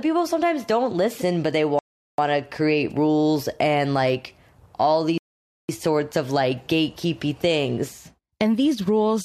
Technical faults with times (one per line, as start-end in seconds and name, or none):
1.79-2.18 rebuffering stall
5.18-5.69 rebuffering stall